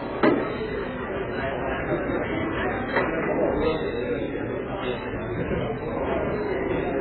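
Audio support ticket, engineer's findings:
Dull, smeared sound throughout, with a warbling, fizzy texture on sustained content. Heavy damage. Likely cause: AAC compression (AAC-LC) at a very low rate, consistent with around 8 kbps. Quantiser starving the spectrum, cut-off pulled down hard. Spectrogram: hard ceiling, nothing above 4.5 kHz; patchy holes or noise-filled bands below it.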